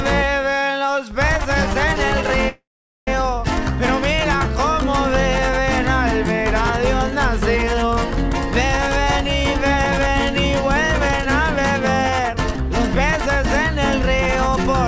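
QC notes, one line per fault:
2.49–3.08 s, call audio freeze: the sound stalls for about 0.59 s. The last sound briefly carries on as a fading buzz or hiss, then about 0.44 s of silence. Playback resumes where it stopped, with nothing lost, likely because delayed packets emptied the jitter buffer.
8.78–13.43 s, jitter buffer speed-up: the sound runs about 2% fast at unchanged pitch. Playback was building up extra delay, so the receiver repeatedly trimmed pitch-period-sized slices, removing about a tenth of a second in total.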